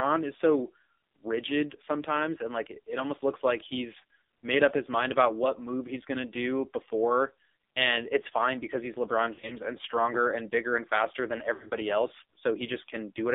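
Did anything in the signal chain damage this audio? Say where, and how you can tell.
Yes. At the codec stage, the speech is buzzy and synthetic throughout, confined to roughly 250 Hz to 3.7 kHz with nothing above. That is heavy AMR narrowband mobile codec damage. The sparse pulse-driven vocal-tract model fits a low rate near 5.9 kbps.

In the network and radio path, there are brief warbling dips and smeared, fading stretches at 9.34 to 9.57 s, just before "and stronger and bigger", and at 11.54 to 11.73 s, just after "bigger and faster than". These are lost AMR speech frames. About 80 ms and 100 ms went missing, scattered over 160 ms each, with runs up to 40 and 60 ms. The decoder stretched the last good frame at falling gain.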